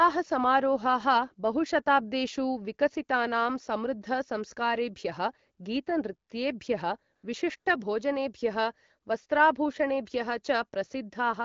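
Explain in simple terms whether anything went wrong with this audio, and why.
AMR comfort noise appears twice, at 7.15 to 7.23 seconds and again at 7.59 to 7.65 seconds, each lasting under a tenth of a second. The phone decided nobody was talking, so it briefly stopped sending the actual sound. The receiving end filled those gaps with smooth, artificial hiss made from a rough sketch of the background. That is why the real background drops out and a steady, flat noise flickers in its place for those moments.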